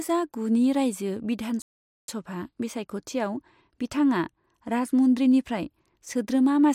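A speech clip with a playback stall from 1.62 s to 2.08 s: the sound cuts off mid-flow and goes completely silent for about 0.46 s before continuing. On a waveform this shows as an abrupt drop to a flat line with no decay tail, and on a spectrogram as a clean vertical gap empty across the whole frequency range. The likely cause is the player running out of buffered data, or its playback thread being blocked, until output recovered.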